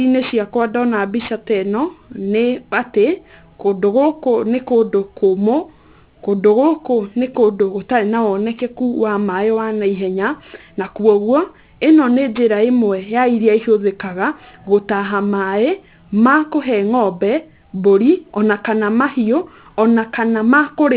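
Aliasing runs throughout this speech clip. Energy above 4 kHz, which points to a drop to an 8 kHz rate without an anti-aliasing filter, folds back below that edge as unrelated tones roughly 30 dB under the speech, making sibilants gritty and metallic.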